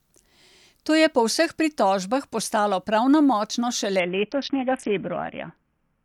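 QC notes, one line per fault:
4.00 to 6.04 s, Bluetooth SBC bit pool drop: treble goes dull and gritty to the end, as the bit pool seems to fall from 31 to around 5 (roughly 50 kbps).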